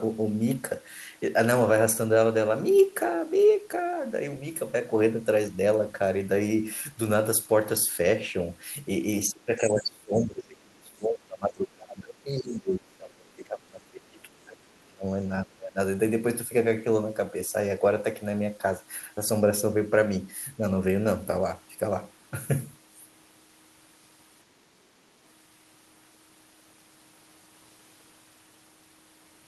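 Speech dips about 10 dB at 9.29 to 9.48 s, then sinks by around 25 dB from 9.7 to 15.2 s and again from 15.43 to 15.79 s. This is likely speech suppressed in double talk, where an echo canceller turns the talker down while both sides speak. The waveform shrinks and the spectrogram fades in those spans.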